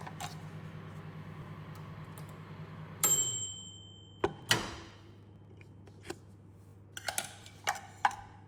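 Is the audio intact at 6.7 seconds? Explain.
No. Between 6.69 and 6.73 s, a Bluetooth stutter: about 41 ms of packets went missing, so the receiver replayed its last buffer, a brief repeating buzz before the sound jumps ahead.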